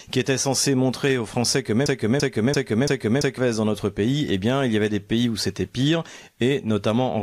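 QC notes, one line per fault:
1.86–3.38 s, broken-record loop: the speech suddenly stutters, replaying the same 0.34 s fragment four times back to back with identical timing and tone, then carries on as if nothing happened. The mechanical sameness of each pass sets it apart from a natural repetition. The likely cause is a stall in the player, encoder or stream that kept resending the last fragment it held, so the audio due in those 1.5 s never plays.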